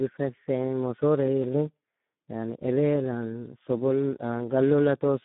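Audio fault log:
Throughout, Speex codec: speech is hoarse, buzzy and robotic from a starved excitation, which fits about 8 kbps, unlike simple 150 Hz to 3.6 kHz band-limiting.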